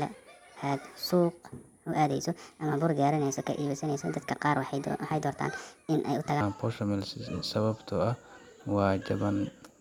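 From 0.0 to 6.41 s, a section at the wrong speed runs 1.4 times fast, pitched about five semitones up, likely from a clock mismatch.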